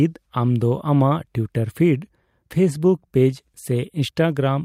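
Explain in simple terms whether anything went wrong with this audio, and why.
Nothing went wrong here.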